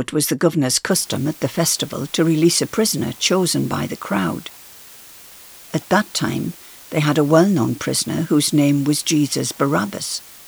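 From 0.91 s to the end of the clip at about 10.48 s, the speech has been requantised to a very low bit depth with dither: random noise was added before each sample was rounded, so the rounding error comes out as steady white noise rather than distortion. The level of that noise, roughly 25 dB below the speech, points to only about 7 bits. It is heard as a constant, even hiss beneath the speech, with no grit or crackle.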